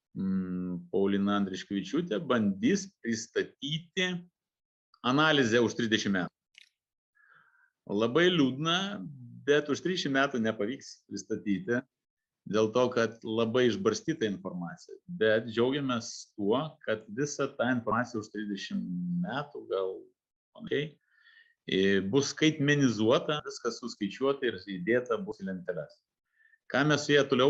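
At 6.27 s the sound jumps forward with compressed frames skipped, then again at 11.79–11.84, 17.91–17.95, 20.67–20.72, 23.39–23.43 and 25.31–25.35 s. Each time, whole coded frames never reach playback, so roughly a tenth of a second of audio is lost (more, about 0.15 s, at 23.39 s and a little less at 25.31 s). The jump sizes fit a 20 ms frame. Unlike a dropout, there is no silent gap.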